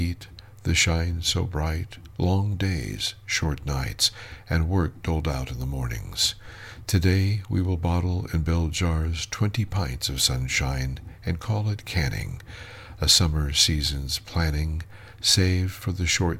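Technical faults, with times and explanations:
No technical faults can be heard anywhere in the recording, and the signal stays steady and intact throughout.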